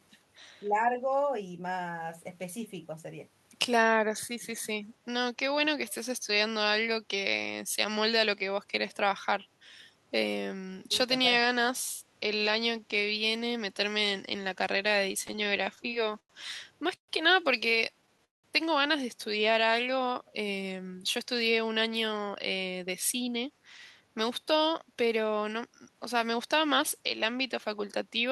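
At 0.61 to 1.03 s and again at 4.3 to 4.65 s the voice suddenly sinks for roughly a third of a second each time. The first dip goes down by about 15 dB and the second by about 20 dB. This is speech suppressed in double talk. The likely cause is that both ends were talking at once, and the echo canceller could not tell this talker apart from loudspeaker echo, so it turned everything down.

From 5.91 to 5.95 s a faint scrap of the voice comes back 267 ms after the original, about 30 dB below the live speech. This is an echo leak. It was likely caused by a loudspeaker at the far end whose echo canceller let part of what its microphone picked up slip through and be sent back down the line.

Between 15.27 and 16.31 s the audio catches and drags through 13 short hitches, the longest 99 ms. About 220 ms of held or stretched sound fills roughly a fifth of that stretch. This is repeated stalls (stutter): packets kept arriving late, the jitter buffer kept running dry, and each time the receiver extended the last sound until the stream resumed. 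Nothing is lost, only delayed.

At 16.95 to 17.10 s the sound stops and is replaced by a brief fading fill that goes to silence for about 100 ms before carrying on exactly where it left off. This is a call audio freeze, 130 ms in all, with nothing missing. The likely cause is held-up packets that emptied the jitter buffer, so the receiver bridged the wait with concealment and then silence.

The stutter returns from 17.92 to 18.46 s, this time as 5 stalls. The longest lasts 190 ms, and about 232 ms of filler covers nearly half of the span. This heavier, more broken dragging has the same cause: late packets starving the jitter buffer over and over.

From 19.60 to 20.23 s the talking runs noticeably slow, at about 89% speed, with drawn-out sounds while the pitch stays put. This is a jitter buffer slow-down. To build up a reserve, the receiver repeated single pitch periods and bits of pauses many times in a row, adding 74 ms to that passage.

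Two stretches then run quick at an unchanged pitch and sound slightly hurried. The first, from 22.03 to 23.58 s, plays at about 107% speed with about a tenth of a second removed. The second, from 24.00 to 26.35 s, plays at about 110% speed with about a fifth of a second removed. This is jitter buffer speed-up: with more audio buffered than its target, the receiver trimmed short pitch-period pieces again and again to reduce the delay.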